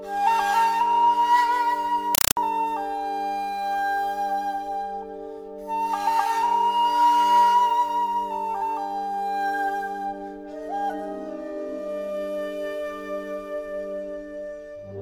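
From 2.15 s to 2.37 s the sound is replaced by very loud, chattering static. This is a compressed stream played as audio. A Dolby Digital stream reached the output undecoded, and its data was treated as ordinary samples. Each frame becomes a burst of noise about 4 ms long, followed by silent padding. The bursts repeat 31.25 times a second, giving the harsh rattle. The pattern fits a 192 kbps AC-3 stream.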